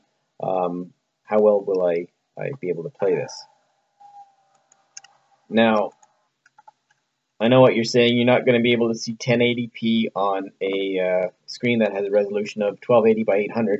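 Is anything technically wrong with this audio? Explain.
No, nothing technically wrong can be heard in this audio. There is no fault to point to at any moment in the clip.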